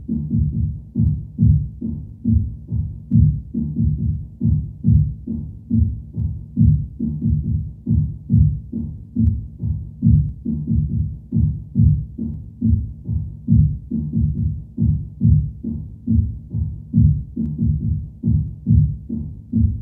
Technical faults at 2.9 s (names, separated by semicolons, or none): periodic USB or driver dropouts